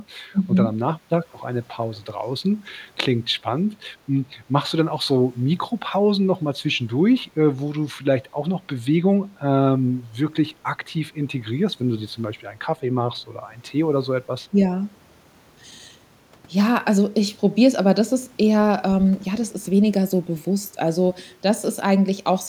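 From 0.32 to 0.47 s the talker's voice is pulled down in short bites, about 70 ms in total, with the deepest dip around 25 dB. This is speech suppressed in double talk. The likely cause is an echo canceller that could not tell this talker apart from the far side playing through its loudspeaker while both spoke together, so it turned down everything, leaving the voice momentarily turned down.

At 1.95 to 1.99 s, and again at 2.68 to 2.73 s, a faint delayed copy of the speech appears, trailing the original by 275 ms. This is echo leak, heard as brief scraps sitting around 35 dB and then around 40 dB below the direct speech. It likely comes from a loudspeaker endpoint whose echo canceller let part of its microphone pickup through and sent it back down the line.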